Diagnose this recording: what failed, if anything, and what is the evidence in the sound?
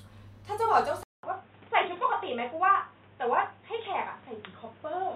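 At 1.03 s the speech cuts out for 200 ms. After it, nothing passes above 3.8 kHz. The sound turns dull and a little quieter, with a new noise floor about 30 dB below the speech. This points to the input likely switched to a poorer device at the driver stage.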